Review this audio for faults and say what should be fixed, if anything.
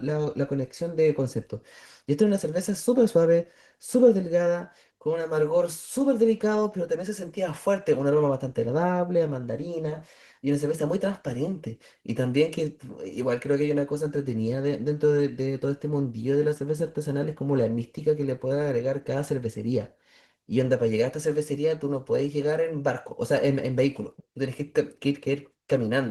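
Opus voice compression runs throughout the speech. Its low bitrate, which fits roughly 16 kbps, leaves it plainly hoarse and slightly robotic. Hybrid coding splits the band at 8 kHz, with coarse excitation below and thin, patchy energy above. On a spectrogram this shows as blotchy high-band texture that changes every 20 ms frame. To prevent it, encode at a higher bitrate or keep an uncompressed master.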